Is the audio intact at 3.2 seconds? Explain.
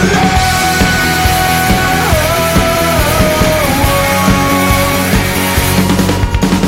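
No. Between 3.17 and 3.19 s there are chunks out of order. A single 10 ms block of audio arrived one chunk late, so it plays after the block that should have followed it and the two are swapped. No samples are missing, but the waveform is broken at three hard joins. The result is a brief jumbled, garbled instant.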